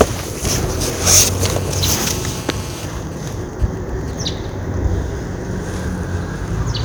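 A recording of everyday sounds, with GSM phone buzz from 1.41 to 2.85 s. A 2G handset in an active call nearby is transmitting its radio bursts about 217 times a second, and the audio circuitry is rectifying those pulses into the signal path. The result is a hard, raspy buzz at 217 Hz, rich in harmonics and unrelated to the sound being recorded, sitting steadily at about 16 dB below the wanted signal for the whole interval.

From 2.93 to 4.50 s the interference changes to GSM signalling bursts. A phone is in a call, but with its user silent it transmits only short groups of bursts rather than a continuous train. After rectification these come through as even ticks with a longer 217 Hz buzz twice a second. They are weaker than the earlier buzz, at around 25 dB below the signal.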